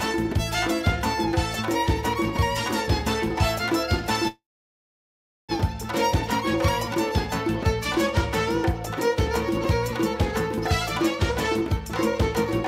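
A call audio freeze runs from 4.28 to 5.52 s. The sound smears into a brief fading buzz, then about 1.1 s of silence, likely because delayed packets let the jitter buffer run dry. Playback resumes where it stopped, with nothing lost but everything after it arriving about 1.2 s late.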